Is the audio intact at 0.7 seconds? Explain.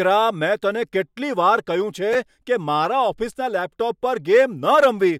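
Yes, the speech is intact at 0.7 seconds, with no dropout, click, distortion or other fault at that moment.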